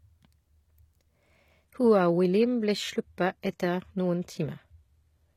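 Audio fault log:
1.65 s to 5.37 s, adaptive stream at a lower bitrate: the speech changes quality abruptly, with no gap, as the player drops to a cheaper version of the stream, which points to a fall from about 96 kbit/s AAC to HE-AAC near 20 kbit/s. Nothing survives above 14.9 kHz, so the treble dulls, and coding artefacts thicken. On a spectrogram the upper band is cut off sharply at that instant, while the waveform shows no break.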